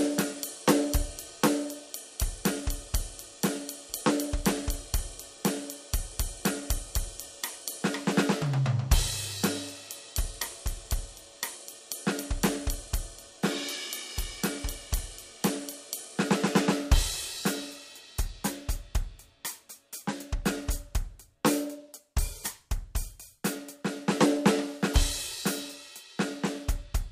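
No technical faults are audible.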